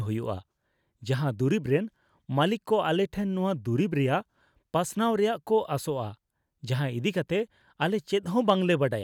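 No technical faults can be heard anywhere in the speech. There is nothing to place on a timeline, so no events are listed.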